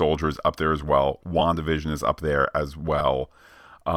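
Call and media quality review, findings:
Lost LE Audio frames at 1.39 s and 2.99–3.01 s: brief hiss-like smear replacing the speech, each about 15 ms, consistent with two lost 7.5 ms LC3 frames. The decoder refills the gap with the last spectrum under random signs. Spectrogram shows a short noisy patch where harmonics blur; the waveform shows a tiny irregular segment. Light codec coding sits underneath throughout.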